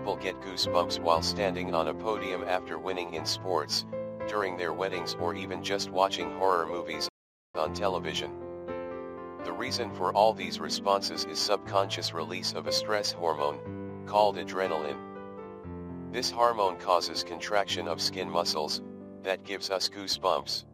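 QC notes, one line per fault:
7.09–7.55 s playback stall: the sound drops to silence for 456 ms mid-flow, then resumes. Likely the player ran short of buffered data.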